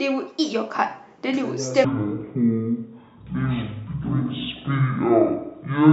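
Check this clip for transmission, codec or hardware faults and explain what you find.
One fault is present: a wrong sample rate, starting at 1.85 s and running to the end of the clip. From that point the speech drops to half speed and falls a full octave (12 semitones), which points to material captured at about 44.1 kHz being played out at about 22 kHz with no conversion. Speed and pitch move together by that same ratio, which separates it from a pitch shift or time stretch, where one changes without the other. The result is low, dragging speech.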